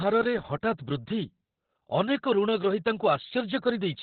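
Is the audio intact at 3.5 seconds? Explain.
No. Opus voice compression covers the whole clip. Coarse narrowband SILK coding cuts everything above 4.4 kHz, fitting roughly 8 kbps. Speech sounds muffled, hoarse and robotic.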